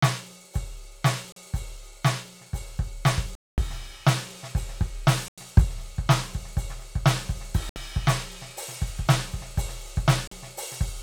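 Music with five short holes where the output drops to silence and then resumes further along, as though the track kept playing: at 1.32 s (40 ms), 3.35 s (227 ms), 5.28 s (93 ms), 7.69 s (67 ms) and 10.27 s (40 ms). The edges are abrupt or fade over a few milliseconds. This is a Bluetooth dropout, likely from packets arriving too late at the headphones and being discarded. The gap lengths fit runs of lost packets of roughly 13 ms each.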